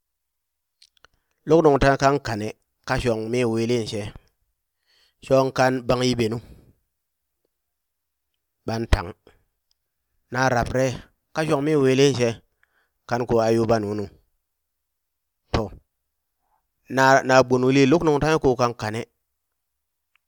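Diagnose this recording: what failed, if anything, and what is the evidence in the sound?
No stage of the chain has left an audible mark on this speech recording. There is nothing in the sound to diagnose.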